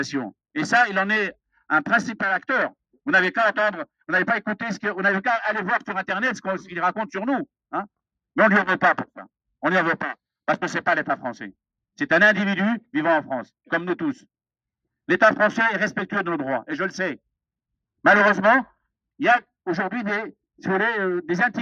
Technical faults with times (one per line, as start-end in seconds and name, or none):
none